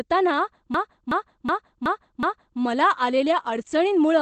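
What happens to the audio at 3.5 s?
At 3.5 s, as throughout, Opus voice compression in its SILK mode codes the excitation coarsely and cuts the band to wideband, fitting a bitrate near 12 kbps. The speech has nothing above about 8.4 kHz and sounds plainly muffled, hoarse and faintly robotic.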